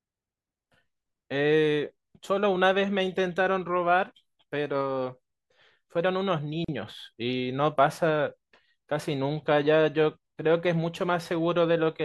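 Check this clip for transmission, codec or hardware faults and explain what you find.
One fault. A gap at a join of encoded pieces at 6.65 to 6.68 s leaves a 39 ms gap where untrimmed encoder delay and end padding meet. The speech stops, then resumes where it stopped.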